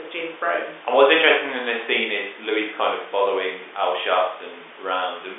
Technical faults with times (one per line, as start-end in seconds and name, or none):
none